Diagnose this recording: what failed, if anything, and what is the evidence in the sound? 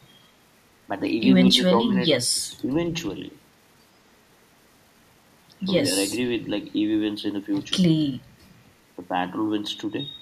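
Call processing failed. Between 1.51 and 1.93 s the speech dips by about 10 dB, in pieces totalling around 300 ms. This is likely speech suppressed in double talk. The echo canceller mistook overlapping far-end sound for echo and attenuated the talker too.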